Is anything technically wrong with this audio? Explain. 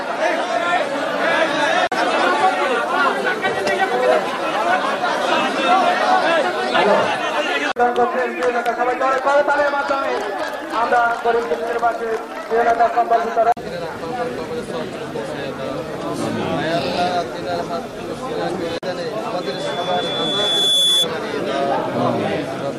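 Yes. There is loudspeaker feedback squeal from 19.41 to 21.09 s. A microphone is picking up the loudspeaker it feeds. At 3.4 kHz the gain around that loop exceeds one, so the tone feeds itself and keeps growing. It swells over about a second and a half into a steady whistle. At its peak it sits roughly 5 dB above the rest of the sound. It stops at 21.09 s.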